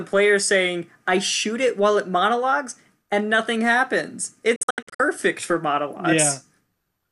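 It's a speech clip with a digital broadcast dropout from 4.56 to 5.0 s, just after "monologues and nothing happens": the receiver lost frames and muted, leaving short silent holes (the longest 72 ms) that fade in about 3 ms, totalling 288 ms, which points to roughly a dozen lost frames.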